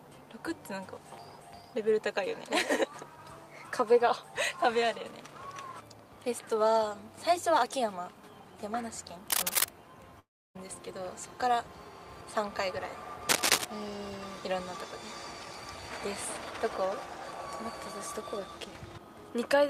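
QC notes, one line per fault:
9.28–9.69 s and 13.29–13.66 s, cable scratch noise: dense, uneven bursts of scratching and rustling sit a few decibels above the sound for about 0.4 s each time. These are likely from a worn cable, connector or control being moved, its contact resistance jumping rapidly and injecting noise.
10.19–10.57 s, long network dropout: about 360 ms of audio never arrived. The receiver stretched the last sound into a fading buzz or hiss, leaving near-silence before the audio resumes further on with that stretch missing, likely from a network interruption.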